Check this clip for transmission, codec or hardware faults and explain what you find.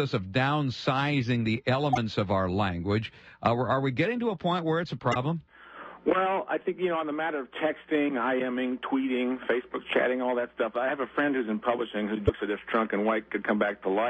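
There's one fault type here, damaged data in a compressed stream, hitting three times: 1.92–1.98 s, 5.11–5.16 s and 12.24–12.30 s, each lasting roughly 55–60 ms. Somewhere in the compressed data some bytes got mangled, so the decoder can't parse them properly, loses its place, and has to hunt for the next valid frame header before it recovers. You hear each one as a brief chirp, squawk, click or short hole cutting into the audio.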